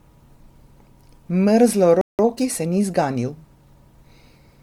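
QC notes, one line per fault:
Throughout: generation loss. The speech has a swirling, hollow quality and smeared consonant attacks, beyond what a single MP3 pass at 96 kbit/s would leave. This is likely the result of being decoded and re-encoded roughly seven times. Each pass quantises on a shifted frame grid, so the holes and noise from earlier passes stack up. Unlike a single low-bitrate encode, the damage is cumulative: the smearing and phasey swirl outweigh any simple loss of treble.
2.01 to 2.19 s: playback stall. The speech halts abruptly mid-flow for about 176 ms of silence, then resumes. The likely cause is the player running out of buffered data or its output thread being blocked, so nothing reached the output until it recovered. This differs from a dropout or packet loss. The output simply goes silent.
2.19 to 3.35 s: time-compressed catch-up. Right after the stall, the speech runs about 1.15 times faster for just over a second while keeping its normal pitch. 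The player is working off the backlog the stall created by cutting small slices out of the audio and cross-fading the joins. A simple speed-up would raise the pitch along with the tempo. Here only the pace changes.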